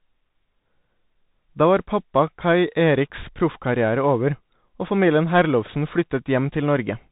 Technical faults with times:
0.00-7.12 Bluetooth CVSD headset codec

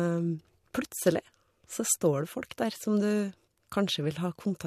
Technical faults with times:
none

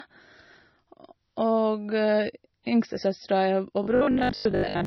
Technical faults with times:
0.00-4.87 low-bitrate audio saved at a high bitrate
3.83-4.85 robotic sound from repeated short buffers

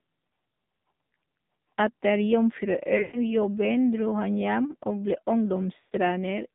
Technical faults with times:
0.00-6.55 AMR narrowband mobile codec
2.98-3.34 lost AMR speech frames
5.80-5.93 lost AMR speech frames

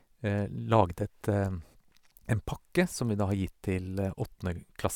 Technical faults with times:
none

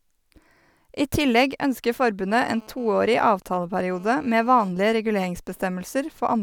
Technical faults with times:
2.30-4.68 GSM phone buzz

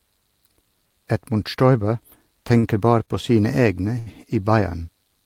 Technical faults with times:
2.59-2.66 short stall from a late packet
3.05-3.10 short stall from a late packet
3.98-4.09 short stall from a late packet

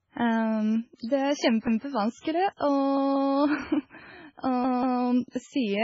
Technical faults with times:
0.00-5.84 MP3 compression
0.95-0.99 pre-echo
2.57-2.61 pre-echo
4.64-5.02 repeated buffer
5.30-5.33 pre-echo

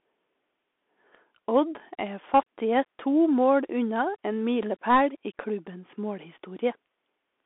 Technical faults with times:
0.00-7.46 Bluetooth CVSD headset codec

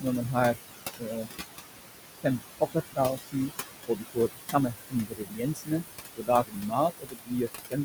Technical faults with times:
0.00-7.85 noise suppressor artifacts
0.95-1.32 speech cut by the noise suppressor
2.19-3.52 speech cut by the noise suppressor
3.85-5.84 speech cut by the noise suppressor
6.16-7.79 speech cut by the noise suppressor

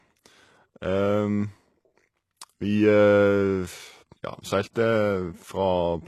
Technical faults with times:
0.00-6.08 HE-AAC compression
4.73-4.76 pre-echo

